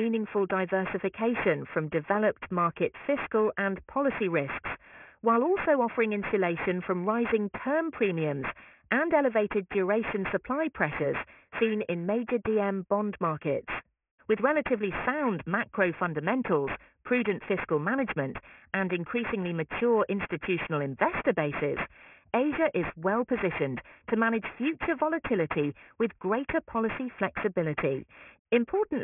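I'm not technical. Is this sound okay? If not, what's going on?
No. Aliasing runs through the whole clip, from start to finish. The audio was squeezed into a much lower-quality format without first removing its highest sounds, so anything above about 3 kHz folds back down as wrong pitches, making hissy and bright parts sound gritty and metallic.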